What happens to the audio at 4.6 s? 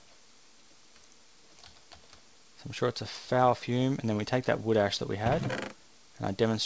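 Nothing goes wrong at 4.6 s: the audio passes through intact, with only the steady 8 kHz upper limit of the G.722 call path that runs through the whole clip.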